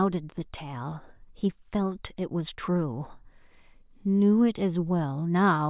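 No technical faults can be heard in this speech recording.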